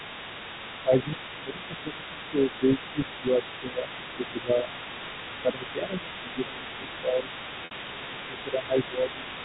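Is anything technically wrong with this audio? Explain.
Yes, there are three faults in this speech.

Other side's voice leaking through runs from 0.0 to 9.45 s: a faint second voice sits roughly 15 dB under the talker, likely residual loudspeaker echo the canceller missed, showing as overlapping, fainter harmonic stripes on a spectrogram.

Speech suppressed in double talk appears at 0.83–1.10, 1.37–2.99, 3.15–3.44, 3.60–4.94, 5.31–7.32 and 7.49–9.26 s. The talker dips by roughly 5 to 15 dB, likely the canceller ducking everything while both sides speak, seen as sagging waveform envelopes.

Packet loss with pitch repetition hits at 7.65–7.71 s: a 60 ms gap, which fits two lost packets, bridged by a repeated pitch period that sounds briefly buzzy and looks like identical repeating cycles fading out. This all comes through G.711 telephone coding, which caps the audio at 4 kHz.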